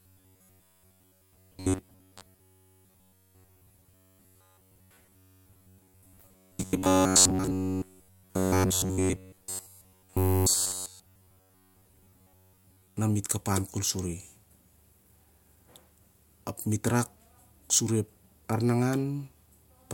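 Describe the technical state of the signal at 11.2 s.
At 11.2 s the speech carries robotic sound from repeated short buffers, running from 0.01 to 12.97 s, just before "na mit". Late audio was likely covered by looping roughly 10.7 ms snippets over most of the sound, imposing a rigid 93.8 Hz metallic buzz. Unlike mains hum, the buzz still loosely tracks the speech.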